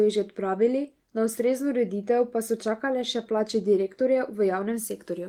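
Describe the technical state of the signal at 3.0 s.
At 3.0 s the signal is intact, with no audible technical fault at that moment.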